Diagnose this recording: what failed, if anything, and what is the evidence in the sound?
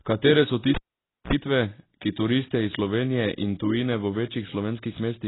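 Cable pulled and plugged in, 0.75 to 1.33 s: analogue wiring fault. A pop, about 0.53 s of near silence, a 54 ms burst of 60 Hz buzz as the tip touches, then another pop.

Sample clock jitter, throughout: converter stage. An unstable clock times samples slightly wrong by a few microseconds, adding roughness roughly 30 dB below the speech that tracks loud, bright passages.

Throughout, the speech sounds dull and smeared with a watery texture, and nothing is present above 3.9 kHz. The likely cause is heavy AAC compression at the codec stage, at a bitrate low enough to suggest about 16 kbps.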